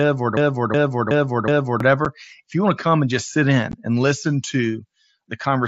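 Speech carried over a wideband Bluetooth headset link, with the mSBC codec's 8 kHz ceiling and light graininess audible, opens inside a broken-record loop. From 0.00 to 1.80 s a 0.37 s fragment repeats exactly, back to back, four times. The likely cause is a player or stream stall that resent its last buffer. The repeats are identical and do not decay, which separates them from an echo. Unconcealed Bluetooth headset packet loss then leaves two abrupt-edged holes. The first is a 7.5 ms gap at 2.05 s. The second is a 15 ms gap at 3.72 s, between "come and just sit" and "and listen", which fits two lost packets. In both, the whole signal drops out and comes back, unlike the codec's upper bands flickering while the speech continues underneath.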